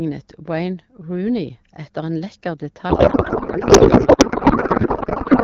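From 2.89 s to the end at 5.44 s, the speech gives way to garbled noise and warble that barely tracks it. This is a codec payload misread: the AMR wideband frames, clear before that point, were octet-aligned but decoded as bandwidth-efficient, so every field landed out of place.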